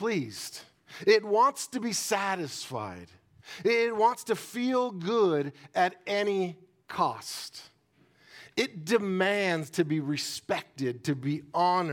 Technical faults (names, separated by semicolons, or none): none